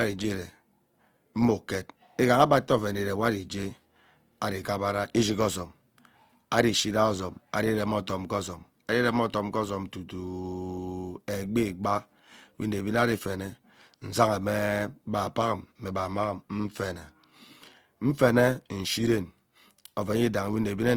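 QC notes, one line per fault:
throughout, Opus compression: likely a music-mode encode around 24 kbps filling starved bands with noise, leaving the speech plainly grainy and rough.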